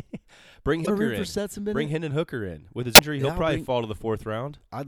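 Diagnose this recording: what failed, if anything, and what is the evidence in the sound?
The fault sits at the codec stage: damaged data in a compressed stream. Two brief glitches interrupt the speech, at 0.82 to 0.88 s and at 2.94 to 3.00 s. Corrupted bytes made the decoder misread those frames, lose sync and hunt for the next valid frame header.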